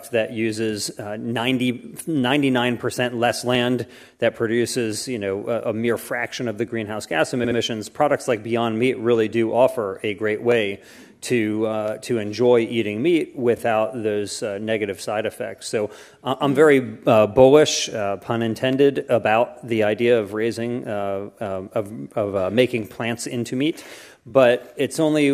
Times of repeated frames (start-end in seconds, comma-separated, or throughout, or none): 7.43-7.57, 13.56-13.59, 24.29-24.31